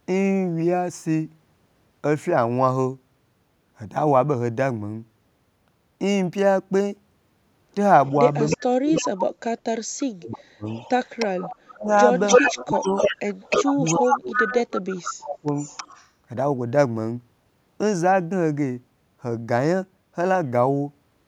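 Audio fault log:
8.06–9.21 s and 10.31–16.09 s, echo leak: The far end's echo canceller likely let part of what its microphone heard from the loudspeaker pass back down the line. A delayed copy of the speech returns 309 ms behind the original, only about 5 dB quieter, so the speech is trailed by a near-level repeat, running longest through the stretch from 10.31 to 16.09 s.
8.57–9.03 s, 9.67–10.65 s, 11.71–12.88 s and 13.59–15.5 s, speech suppressed in double talk: With both sides talking at once, the echo canceller likely could not separate the local talker from the returning echo and turned both down. The speech dips sharply in pieces, by around 40 dB at its deepest in the first two spans, about 25 dB in the third and about 35 dB in the fourth, leaving gaps and thinned fragments that total roughly one and a half seconds in the longest span.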